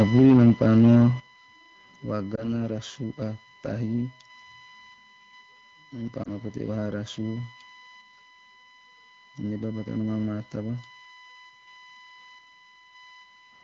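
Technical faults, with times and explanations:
Throughout: USB whine. Current drawn by the USB bus in 1 ms frames is leaking into the microphone's power or ground, adding a fixed 1 kHz whine with its strongest component at the 2 kHz harmonic, about 25 dB below the speech.
1.2 s: microphone volume stepped down. The call software likely judged the input too hot and cut the device's capture volume in a single step, so speech and background drop together by about 10 dB at once.
2.35 to 2.48 s and 6.23 to 6.28 s (after "nam pa"): lost AMR speech frames. Each time one 20 ms frame of the AMR-WB stream was corrupted on the radio link. The decoder concealed it by repeating the previous pitch and vocal tract settings at reduced gain, which causes a brief dip or warble before the speech recovers.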